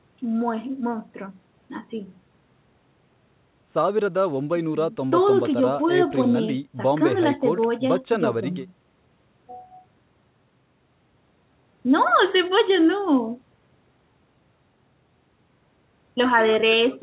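Nothing technically wrong turns up in this speech recording, which has simply come over a call path whose content stops at about 4 kHz, fitting a G.711 A-law phone codec at 64 kbps.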